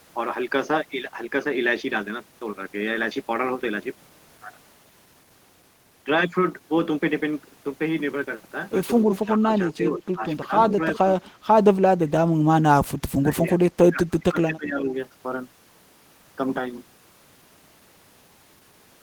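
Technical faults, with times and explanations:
9.1–9.26 s and 9.71–10.03 s, echo leak: a delayed copy of the speech trails the original by 324 ms, first at about 10 dB below it and then weaker, at about 20 dB down. The likely cause is a far end playing the call on a loudspeaker whose echo canceller did not fully remove what its microphone picked up, so a short residue was sent back.
9.35–10.8 s, 11.21–11.47 s and 11.99–14.87 s, speech suppressed in double talk: the speech dips and breaks up in pieces, for about half a second in total across the first span, a brief moment in the second, and roughly two seconds in the last. The drops reach about 15 dB, and about 25 dB in the final stretch. This likely comes from an echo canceller that could not tell local speech from loudspeaker echo while both sides talked, and turned everything down.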